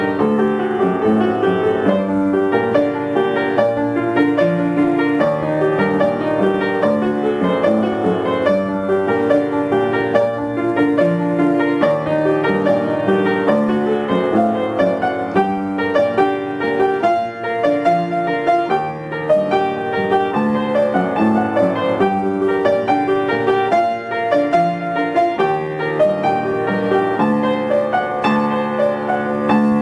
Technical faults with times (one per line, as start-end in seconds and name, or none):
none